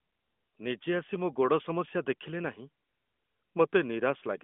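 Nothing stood out as a technical fault on listening to this speech, which comes over an AMR narrowband mobile codec path with nothing above 3.6 kHz.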